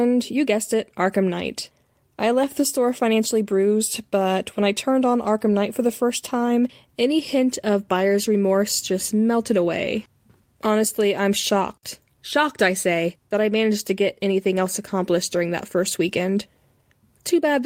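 Nothing stood out on listening through the speech in this clip.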